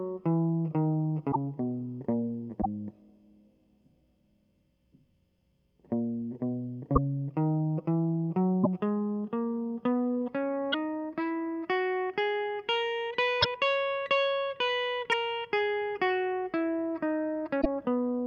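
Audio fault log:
1.31–1.36, 2.61–2.66, 6.95–6.98, 8.63–8.67, 10.72–10.75, 13.41–13.46, 15.11–15.14, 17.61–17.66 s, broken MP3 bit reservoir: the music briefly jumps, with 28 to 54 ms chirps or holes, about one to two 24 ms frames, likely where missing frames left later frames reading borrowed bits from the wrong data.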